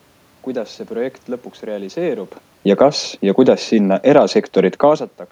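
From 2.66 s to 5.06 s the automatic gain falls: the gain control judged the input too loud or its background noise too strong and eased its level down by about 4 dB over those 2.4 seconds. The whole signal sinks together, and the room noise drops in step with the speech. That shared sinking separates it from the talker shifting position around two seconds in, where only the voice changed level and the room noise stayed where it was.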